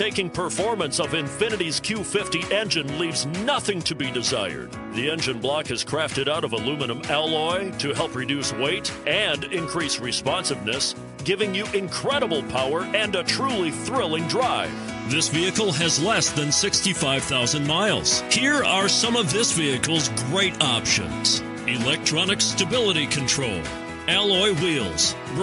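No technical faults can be heard anywhere in the audio.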